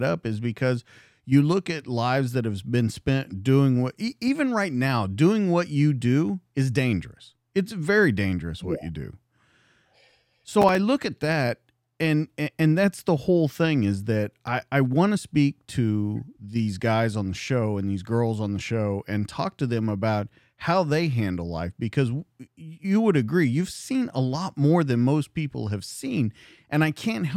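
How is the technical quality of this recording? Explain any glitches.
The recording has one glitch, a short burst of processor overload crackle. From 10.40 to 10.75 s, the processor fell behind and missed several consecutive buffer deadlines, each a few milliseconds long, leaving silent gaps with hard edges. The speech turns into a gritty, tearing crackle for that third of a second, then clears.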